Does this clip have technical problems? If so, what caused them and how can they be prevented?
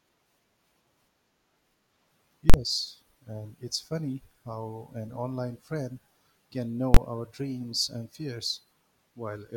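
Yes. The speech has two invalid numbers at full scale faults. The first runs from 2.50 to 2.54 s, about 43 ms, which fits a 2048-sample block. The second runs from 6.94 to 6.97 s, about 21 ms, which fits a 1024-sample block. It falls between "an online friend can" and "our dreams and". Each is a sharp, very loud bang. A calculation produced infinite or invalid values, and the output was pinned to maximum level for the block. Prevent it by checking each processing stage for invalid values and replacing them with silence before output.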